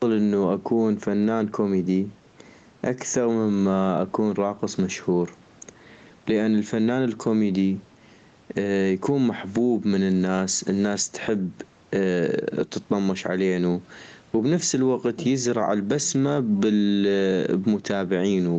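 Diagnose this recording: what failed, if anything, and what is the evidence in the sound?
Gain pumping runs through the whole speech clip, with the gain swinging by around 10 dB. Loud and quiet passages sit unnaturally close in level, giving a squashed quality. The likely cause is an input gain set far too hot at the microphone stage, with a fast limiter or compressor in the call processing clamping down on every peak. Room noise sits about 39 dB below the speech, and the audio tops out near 8 kHz, consistent with the Opus call path.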